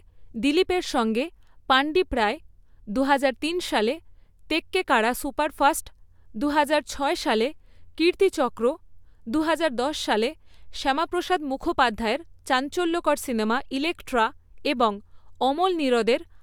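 Nothing stood out as a technical fault on listening to this speech recording.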